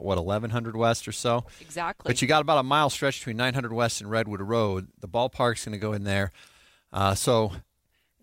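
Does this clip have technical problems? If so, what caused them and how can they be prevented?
No, there are no technical problems to hear in this speech recording. Nothing here calls for a cause or any preventive step.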